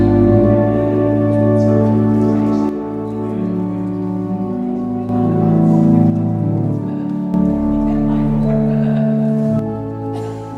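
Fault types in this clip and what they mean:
One channel drops out: three times the level falls suddenly by about 6 dB, the last lasting to the end, likely because one stereo channel went silent before mono summing. The waveform steps down to half height, and the spectrogram dims evenly across all frequencies.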